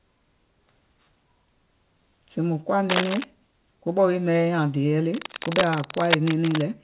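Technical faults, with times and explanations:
2.87–3.24 s and 5.14–6.67 s, cable scratch noise: dense, uneven bursts of scratching sit over the speech, first a little below its level ending just before "kobɛ̀ wii maŋ yai", then roughly as loud. The likely cause is a worn cable or connector whose contact resistance fluctuated as it moved. The bursts stop short of 4 kHz, matching the call path's bandwidth.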